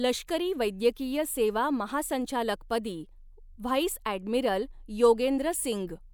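Speech recording with no technical faults audible anywhere in it. Nothing in the audio points to a problem that needs a time or a cause.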